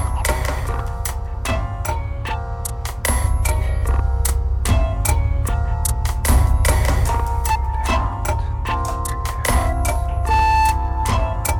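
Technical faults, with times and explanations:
0.25 s, hard clipping: a single brief peak runs about 2 dB past what the stage can carry, so its top gets sliced flat. That squared-off tip sprays harmonics way up high, and you hear it as one quick crackle rather than sustained fuzz.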